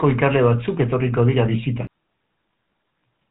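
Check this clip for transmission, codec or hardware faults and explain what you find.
Two faults stand out in this speech clip. The first is a GSM full-rate codec, which runs throughout. The second is a single CD skip.

The GSM full-rate codec colours the whole clip. The coder models the vocal tract as a filter and feeds it with a sparse train of regular pulses. It keeps only a fraction of the excitation detail, which fits a budget of around 13 kbps. That thin excitation gives the voice a plainly audible buzzy, gravelly roughness. There is no content above about 3.8 kHz, so consonants and breath lose their edge.

The CD skip comes at 1.87 s. A jolt or flaw sent the laser to a neighbouring turn of the disc spiral. The player muted for a very short moment, roughly 7 ms, and then carried on from a different point. You hear a small tick, and the speech lurches abruptly forward or back, as if a sliver was cut out or repeated.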